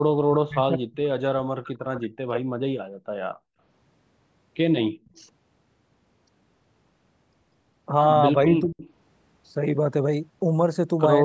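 From 0.27 to 0.98 s and again from 1.3 to 2.52 s the speech sinks deeply, by roughly 40 dB, in a way that sounds like speech suppressed in double talk, likely because the echo canceller, hearing both sides at once, turned everything down. At 3.44 s, for about 150 ms, the room background is gated by the echo canceller, dropping by about 38 dB while the loudspeaker was playing. Unlike the double-talk dips, this is a brief hole in the room tone, not in the speech. At 5.05 s a faint echo leak appears, a copy about 193 ms late and about 40 dB down, likely residue the canceller missed. From 8.45 to 8.82 s the speech dips again, more mildly, by roughly 15 dB, and at 8.81 s a louder echo leak follows, about 196 ms late and about 25 dB below the speech. Being a delayed repeat rather than a loss of level separates the leaks from the suppression, and the repeats are no wider in band than the speech itself, which stops at 8 kHz.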